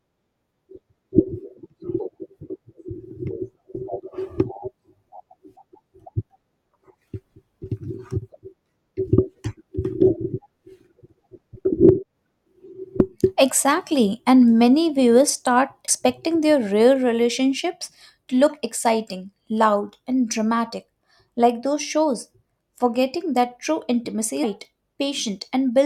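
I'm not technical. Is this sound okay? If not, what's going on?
No. In this speech there are two very brief glitches, at about 15.87 s and 24.43 s. These come from damaged data in a compressed stream: some bytes of the file were corrupted, so the player misread that tiny stretch and stumbled before recovering.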